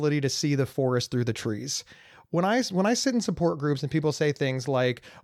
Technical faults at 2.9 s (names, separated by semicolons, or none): none